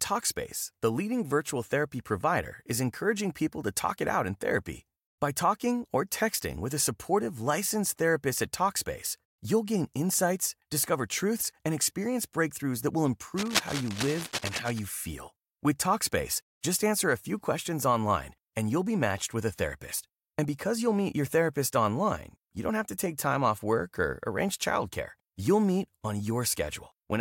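Cable scratch noise, 13.37 to 14.79 s, after "experience breakthroughs that will": dense, uneven scratching bursts nearly as loud as the speech, likely from a worn connector's contact resistance fluctuating.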